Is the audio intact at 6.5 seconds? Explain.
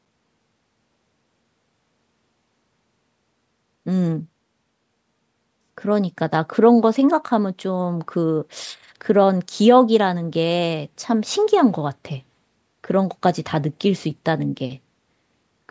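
Yes, the speech at 6.5 s is intact, with no dropout, distortion or other fault at that moment, only the ordinary bass trimming of call microphone processing.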